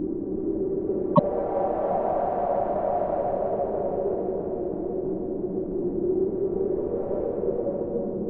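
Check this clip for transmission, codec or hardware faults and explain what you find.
There's one fault here, a brief glitch early on.

From about 1.11 to 1.20 s you get damaged data in a compressed stream. Part of the encoded data there is corrupt, so the decoder misreads those frames, loses sync and hunts for the next valid header. That comes through as a quick chirp or blip lasting roughly 80 ms.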